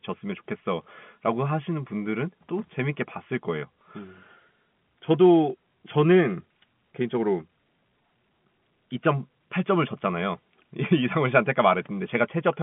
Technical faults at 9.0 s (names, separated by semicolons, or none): none